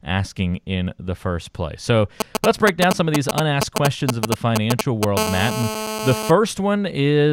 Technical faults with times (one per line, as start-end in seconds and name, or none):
2.20-5.05 GSM signalling bursts
5.17-6.31 GSM phone buzz